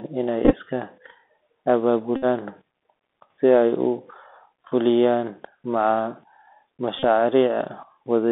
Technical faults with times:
0.00-8.32 Bluetooth CVSD headset codec
0.45-0.54 Bluetooth headset packet repeated
2.16-2.25 Bluetooth headset packet repeated
6.98-7.04 Bluetooth headset packet repeated

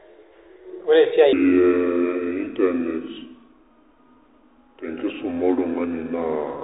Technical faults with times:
0.00-6.63 Bluetooth CVSD headset codec
1.33-6.63 section at the wrong speed

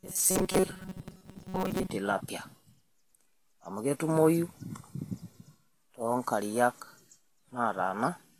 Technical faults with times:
0.00-8.39 Vorbis compression
0.01-1.90 robotic sound from repeated short buffers

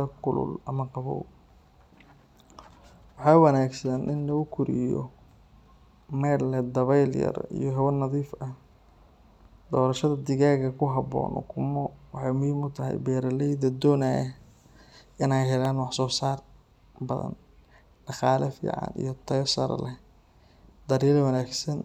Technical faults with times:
15.65 electrical switching spike

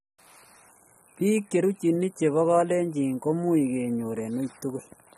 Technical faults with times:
0.00-5.17 AAC compression

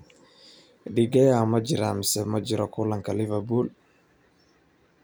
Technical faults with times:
none

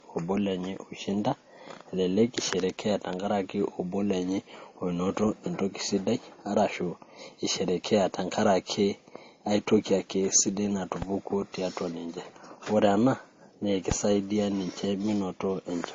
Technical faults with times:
0.00-15.95 transcoding between lossy codecs
11.02-11.05 loud pop
13.91-13.94 loud pop

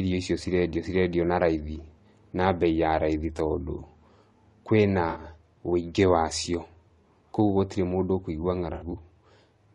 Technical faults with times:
0.00-9.74 low-delay AAC compression
5.09-5.19 AAC frame loss with concealment
8.73-8.95 AAC frame loss with concealment

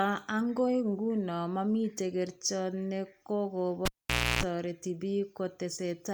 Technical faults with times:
3.85-4.43 cable pulled and plugged in

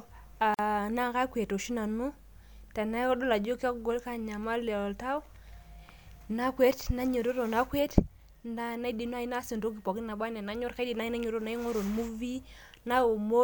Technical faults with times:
0.54-0.59 gap at a join of encoded pieces

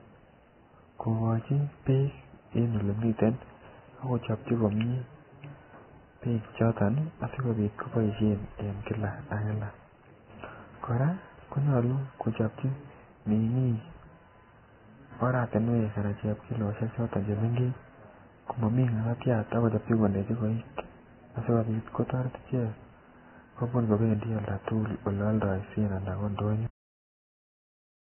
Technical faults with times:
0.00-28.16 Vorbis compression
26.67-28.16 cut-off end

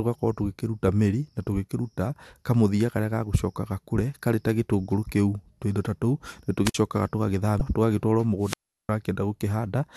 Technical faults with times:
6.65-6.74 wireless microphone squelch dropout
7.58-7.61 damaged data in a compressed stream
8.40-8.90 wireless microphone squelch dropout

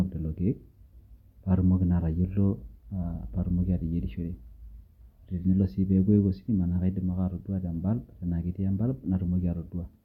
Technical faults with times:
none

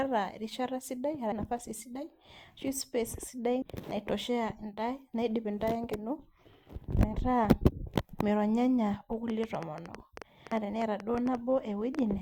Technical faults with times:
1.32 audio missing between chunks
3.62 audio missing between chunks
5.92 audio missing between chunks
9.30-12.00 train of clicks
10.52 audio missing between chunks

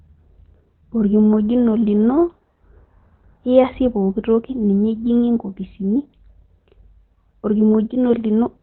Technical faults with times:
0.00-8.63 Opus compression

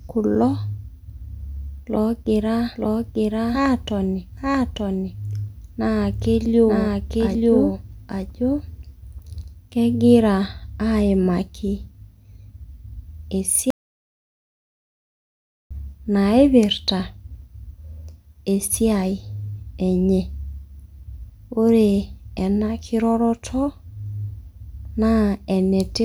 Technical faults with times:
2.76-9.44 doubled audio track
13.70-15.71 audio dropout to silence

